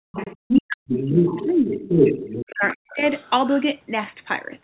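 From 0.12 to 0.36 s the other side's voice leaks through, about 10 dB below the talker. The likely cause is loudspeaker echo the canceller missed, visible as a faint second harmonic pattern on the spectrogram.

From 0.37 to 2.13 s the speech is suppressed in double talk, with about 1.5 s affected in all. It dips by as much as about 40 dB. This is likely the canceller ducking both voices together, and the waveform shows deep gaps in the envelope.

At 0.57 to 0.62 s a brief leak of the other side's voice sits about 5 dB below the talker.

From 0.87 to 3.3 s the other side's voice leaks through at roughly equal level, so two overlapping harmonic stacks appear on the spectrogram.

Within that stretch, from 2.49 to 3.02 s, speech is suppressed again by up to about 40 dB, covering about 0.4 s, with the waveform envelope dropping deeply.

From 3.48 to 3.61 s a faint leak of the other side's voice remains, about 30 dB down, barely visible as weak traces.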